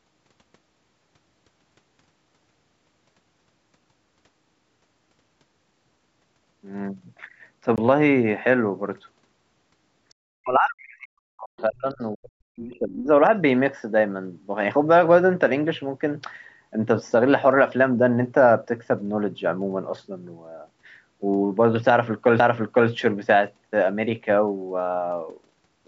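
At 7.76 s a CD skip briefly mutes the speech, with a tick as the laser jumps to another track turn. The playback resumes from a displaced point instead of simply dropping out, which separates it from a plain gap. From 10.10 to 10.14 s a very faint scrap of a second voice, roughly 40 dB below the main speech, slips through, likely the other side's voice leaking through an imperfect echo canceller rather than background talk in the room. Between 10.37 and 13.13 s the main speech dips by as much as about 40 dB for roughly three seconds. This is likely speech suppressed in double talk, with the canceller ducking the talker while the far side speaks, unlike a steady level drop. At 22.39 s a second CD skip leaves only a tiny tick-like mute before the speech jumps on. Throughout, the call microphone path stops at 8 kHz.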